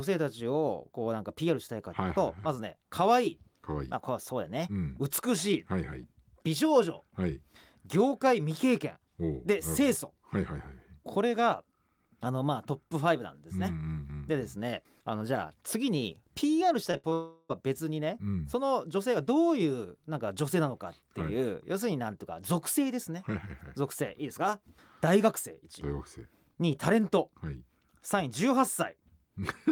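Short concealed packet loss at 16.91 to 16.95 s and again at 17.09 to 17.13 s: each time about 20 ms of the speech failed to arrive, and the receiver bridged the gap by extending the preceding sound, leaving a quick smear or wobble before normal audio resumes.

Burst of packet loss from 16.97 to 17.05 s: roughly 60 ms in a row went missing, so the last sound is stretched into a held buzz or hiss that thins out for about 63 ms before the audio picks up again further along.

Long network dropout from 17.13 to 17.51 s: the sound continues as a fading buzz or hiss for about 360 ms and ends in a brief moment of silence, about 20 ms, before the speech returns with that stretch missing. The likely cause is a long interruption in incoming audio.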